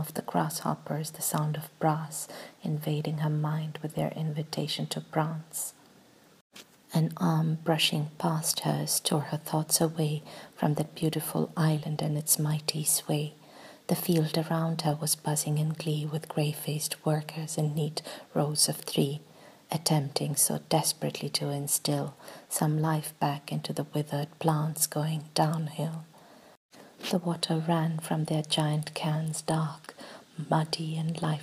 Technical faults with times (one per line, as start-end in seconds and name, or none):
none